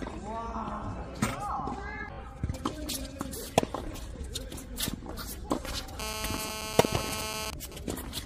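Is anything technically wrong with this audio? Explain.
Yes. From 6.0 to 7.5 s a hard, raspy buzz sits at 217 Hz with a dense stack of harmonics, running steadily and unrelated to the sound underneath, at about 2 dB below the signal. This is GSM phone buzz. A 2G handset close to the equipment is transmitting in radio bursts 217 times a second, and the audio circuitry rectifies those pulses into audible sound. Its steadiness points to a phone in an active call.

From 7.53 to 8.21 s the continuous buzz gives way to even ticks with a longer 217 Hz buzz twice a second, roughly ten decibels below the signal. These are GSM signalling bursts. The same phone is now sending only short groups of radio bursts, which the audio circuit again rectifies into clicks and buzz fragments. This pattern likely comes from the call continuing while the person on the phone has fallen silent.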